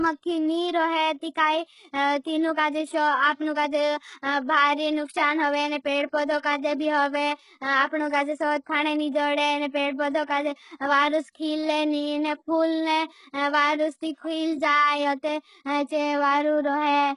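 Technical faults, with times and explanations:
Throughout, HE-AAC compression: the speech has nothing above 11 kHz, and its upper range sounds synthetic, with gritty, lispy s sounds. This is likely spectral band replication, where copied lower bands rebuild the treble, and the heavy damage fits a bitrate near 12 kbps.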